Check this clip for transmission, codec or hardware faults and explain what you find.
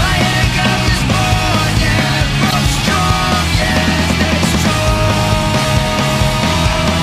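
Two short corrupt frame decoded faults, at 0.60 to 0.66 s and 2.49 to 2.53 s. Damaged compressed frames got decoded anyway, misplacing energy into loud bursts peaking around -5 dBFS, lasting a few frames each.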